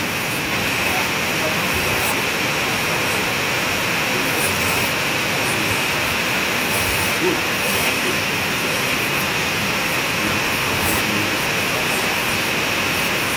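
From 0.1 to 0.52 s, the echo canceller was most likely confused by both sides talking at once. Unable to tell the near talker apart from loudspeaker echo, it turned everything down, and this speech suppressed in double talk leaves the opening speech sharply dipped, falling by roughly 25 dB at its deepest over those four tenths of a second, so the start sounds hollowed out and partly missing.

From 0.53 s to the end, an echo leak is heard. The far end's echo canceller likely failed to remove what its microphone picked up from a loudspeaker, and that residue was sent back. The result is a second copy of the speech arriving about 1.04 s behind the original and only a few decibels quieter, so phrases are shadowed by a clearly audible, delayed repeat that comes back in scraps or longer stretches.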